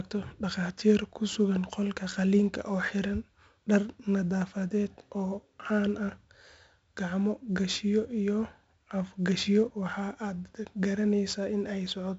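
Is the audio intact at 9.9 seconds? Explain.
No. 4-bit ADPCM compression spans the whole clip, including 9.9 s. Coarse predicted steps add gritty, level-following hiss, seen as broadband spectrogram noise cut off above 7.7 kHz.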